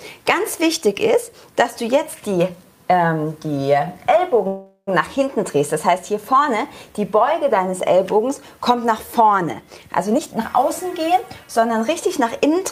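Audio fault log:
4.47–4.89 s, call audio freeze: the sound stalls for about 0.4 s, trailing off as a fading buzz or hiss and then a short silence of about 80 ms, before resuming where it stopped, so nothing is lost. The likely cause is delayed packets emptying the jitter buffer, adding about 400 ms of delay.
10.10–12.54 s, jitter buffer speed-up: the audio runs hurried, at about 113% speed with unchanged pitch, for roughly 2.4 s. The receiver is trimming short pitch-period slices repeatedly, around 0.3 s in total, to shrink the excess delay held in the jitter buffer.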